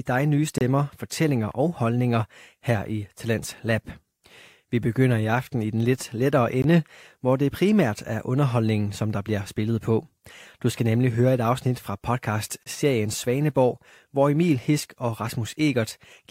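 Hard-edged silent holes cut into the speech at 0.58 s and 12.63 s, each lasting about 27 to 28 ms. These are gaps between stream segments: timestamps on adjacent segments, which fit 6-second segments, fail to meet, so the player inserts silence without losing audio.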